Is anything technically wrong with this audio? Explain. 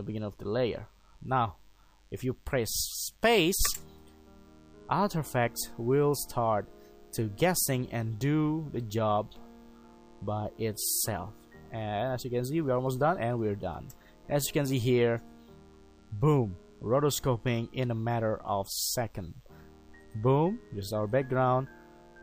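Yes. Throughout the clip there is DECT cordless phone buzz: a nearby DECT handset or base station fires a radio burst every 10 ms, and the audio circuitry rectifies it. This produces a steady, thin 100 Hz buzz rich in harmonics, sitting faintly underneath, roughly 40 dB below the sound.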